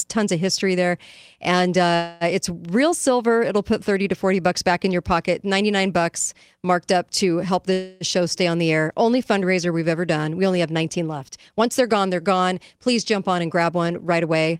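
Call audio freeze at 1.95 s, after "of history there and", and again at 7.73 s, after "marked up to help". In each case the sound stretches into a fading buzz or hiss for about a quarter second (254 ms, then 279 ms) and then resumes unchanged with "it's real silver" and "show stay on the". The likely cause is delayed packets emptying the jitter buffer. Nothing is lost, but the stream ends up later.

Jitter buffer speed-up from 12.77 to 14.57 s, after "they're gone they're gone". The buffer had built up excess delay, so the receiver repeatedly cut short slices of one or a few pitch periods, removing around 150 ms in total. The speech runs at about 108% speed with unchanged pitch and sounds hurried.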